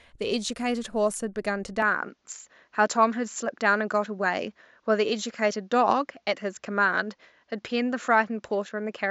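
From 1.82 s the speech abruptly turns duller, with nothing above 7.6 kHz and a faint new noise floor. The likely cause is an input switched to a poorer device.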